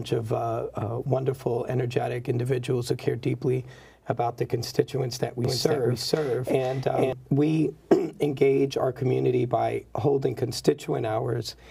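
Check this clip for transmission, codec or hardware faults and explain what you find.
One fault is present: a doubled audio track from 5.45 to 7.13 s. A second full-band copy trails about half a second behind at roughly equal level, likely from a second, slower capture path, and starts and stops abruptly.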